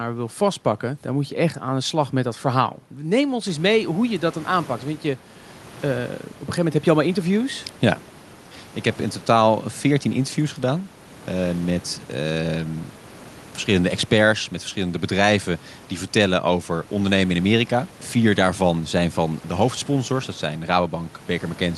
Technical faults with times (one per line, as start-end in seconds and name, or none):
none